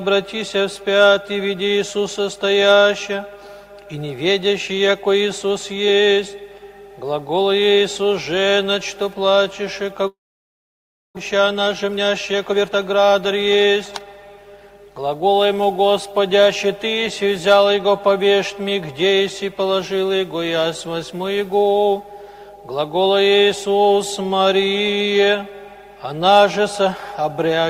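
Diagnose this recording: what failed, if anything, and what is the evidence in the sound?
From 10.07 to 11.19 s the sound decays into a fading buzz, then near-silence, and resumes with about 600 ms missing; likely a long network dropout. The waveform flattens into a gap.

From 11.35 to 14.75 s a jitter buffer speed-up plays audio at 114% speed, same pitch, trimming roughly half a second; the spectrogram shows compressed timing, unchanged harmonics.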